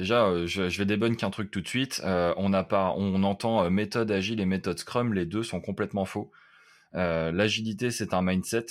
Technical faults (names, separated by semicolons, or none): none